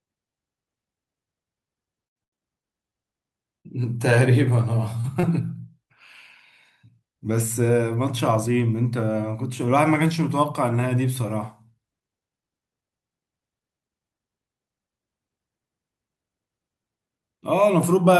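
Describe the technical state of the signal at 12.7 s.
The signal at 12.7 s is intact, with no audible technical fault in the speech at that moment.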